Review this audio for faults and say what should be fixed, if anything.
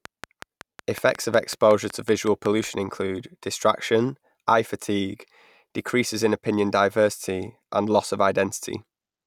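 Train of clicks, 0.05 to 2.65 s: about fifteen evenly spaced pulses at 5.4 per second, roughly 10 dB above the speech, likely electrical interference or a faulty connection or power supply. Keep cables and the interface away from noisy equipment, and check connections and driver stability before recording.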